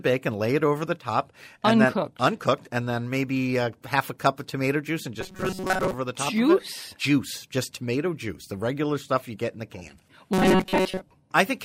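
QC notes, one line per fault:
5.21–5.94 s, robotic sound from repeated short buffers: after "of tomato juice and", speech turns into a rigid metallic buzz at 188 Hz until "the top", likely a buffer of about 5.3 ms replayed while most real audio is skipped.
10.33–11.02 s, robotic sound from repeated short buffers: after "get in the can", the same 188 Hz buzz returns, likely from repeating a roughly 5.3 ms buffer in place of missing audio.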